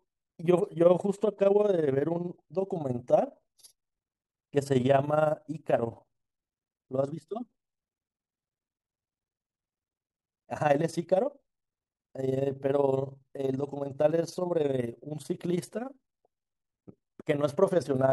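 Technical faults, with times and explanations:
Throughout, overlap-add ripple: the speech level swells and dips by about 11 dB at a steady rate of around 20 times a second, giving a rough flutter over every syllable. The signal was split into windowed frames and rebuilt with an overlap whose windows do not add up to a flat gain, so loudness rises and falls once per frame, which places the frame rate near 20 Hz.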